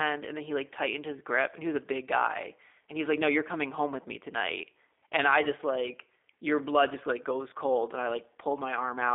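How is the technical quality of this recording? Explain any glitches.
Quality is limited by the G.729 codec throughout. The speech is rebuilt at a rate that fits 8 kbit/s from a vocal-tract model plus sparse pulses, so it sounds rough and slightly synthetic. Nothing passes above 3.7 kHz, leaving a narrow telephone band.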